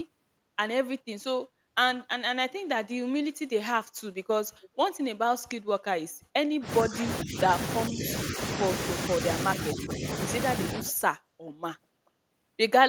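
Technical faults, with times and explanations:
4.61–4.69 s and 10.89–10.95 s, echo leak: brief ghost copies of the speech arrive roughly 0.44–0.45 s late at about 25 dB below the voice, likely from an echo canceller letting loudspeaker pickup through. A spectrogram shows faint, smeared repeats of earlier harmonic patterns.
6.6–7.5 s, 7.89–8.64 s, 9.73–10.3 s and 10.73–10.93 s, speech suppressed in double talk: the voice dips in patches lasting a few tenths of a second, by about 10, 15, 10 and 5 dB, likely because the canceller attenuated both talkers while the far side spoke. The waveform shows notched envelopes.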